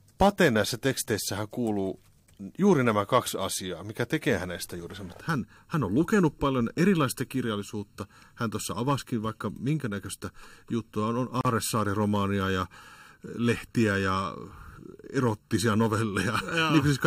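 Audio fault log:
5.2–17.1 s, channel delay (comb filtering): after "tekee hänestä juuri sen" the speech turns hollow and phasey; one channel lags under a millisecond, so mono summing notches evenly from around 700 Hz.
11.41–11.45 s, gap at a join of encoded pieces: a 39 ms gap with smeared edges, then speech resumes; separately encoded pieces kept their encoder delay and padding.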